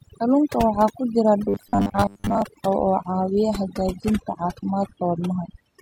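Throughout, overdone noise removal leaves the background near-silent with twinkling specks, while quieter spectral detail of the voice is suppressed. From 1.49 to 2.42 s there is robotic sound from repeated short buffers: a rigid 100 Hz metallic buzz, likely from a 10 ms buffer being replayed while most incoming audio is skipped. From 2.80 s to the end, the adaptive stream drops to a lower bitrate, from AAC-LC 96 kbit/s to HE-AAC 24 kbit/s, with nothing above 14.9 kHz.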